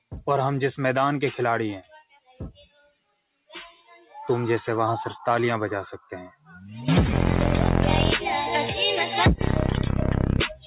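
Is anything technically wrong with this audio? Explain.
Yes. A speech noise suppressor was left running on non-speech sound throughout, treating steady tones, ambience and decay as noise and riding them down. The level swings by around 5 dB, giving a pumping, thinning quality. Unlike a compressor, it reacts to how steady a sound is rather than how loud.

The same suppressor cut specific passages harder: 1.83 to 2.4 s (about 19 dB down at the deepest), 2.58 to 3.53 s (about 18 dB), 3.74 to 4.14 s (about 9 dB) and 6.31 to 6.52 s (about 15 dB). Held and fading parts sink while onsets still come through, which separates this from a dropout, where everything vanishes together. The missing content above 4 kHz belongs to the call path, consistent with G.711 A-law, and stays constant rather than coming and going.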